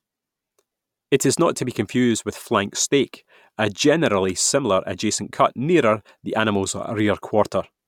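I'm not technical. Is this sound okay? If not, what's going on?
Yes, nothing in this recording stood out as a problem when I listened to it.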